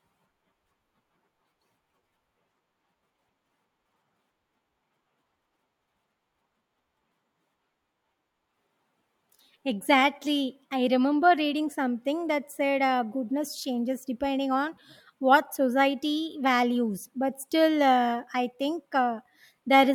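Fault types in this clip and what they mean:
Listening closely to this speech recording, nothing stood out as a problem at any point.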